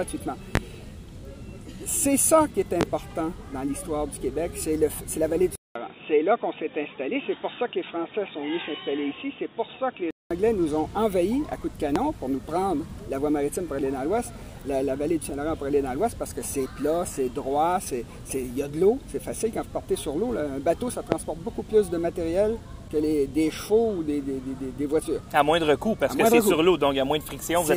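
A loud pop lands at 0.55 to 0.59 s and again at 2.81 to 2.85 s. Each is a single sharp click, roughly 20 to 25 dB above the surrounding sound, which carries on beneath it. The likely cause is a brief voltage step from a plug, switch, static discharge or driver glitch, with the following circuitry shaping it into a short pulse. On the waveform each shows as a thin spike towering over the signal. On a spectrogram it is a narrow vertical stripe running from the lowest to the highest frequencies.

From 5.55 to 10.31 s the input is switched to a poorer device, likely another microphone or a headset's call mode. A gap of about 200 ms marks the switch, visible as a flat, empty stretch in the waveform. After it the sound turns dull and boxy. Nothing passes above 3.8 kHz, so the spectrogram loses everything above that line like a sheet cut off. A faint new noise floor, roughly 45 dB down, fills the background, while the overall level barely changes. 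At 10.31 s the full bandwidth returns.

The same kind of loud pop comes back at 11.96 to 11.99 s and at 21.12 to 21.16 s. Each peaks roughly 20 dB above the sound and shows the same isolated spike in the waveform and full-height vertical line on the spectrogram.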